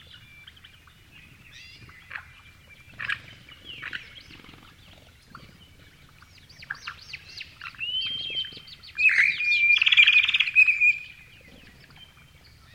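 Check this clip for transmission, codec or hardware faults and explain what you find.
One fault is present: clock drift buffer slips. From 0.2 s to 12.18 s, a click or pop recurs every 0.6 s, about twenty in all. The likely cause is two devices running on separate clocks. The buffer between them slowly drifts until a short block of samples is dropped or repeated. The steady 0.6 s interval fits a clock mismatch of roughly 500 ppm. Each slip removes or doubles only a handful of samples, so it is heard as a brief tick rather than a gap.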